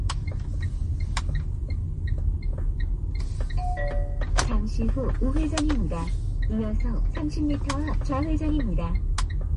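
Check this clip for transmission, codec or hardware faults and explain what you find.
One codec fault runs through the whole clip. It is most likely MP3 compression at a low bitrate. The damage is plainly audible from start to finish. Nothing remains above 11 kHz, so the top end sounds dull and capped. MP3 splits audio into many narrow frequency lines and keeps only those its hearing model ranks as important. Short of bits, it removes the treble and drops weak lines from frame to frame. That gives a watery, swirling texture here. The degree of loss fits a bitrate around 40 kbps.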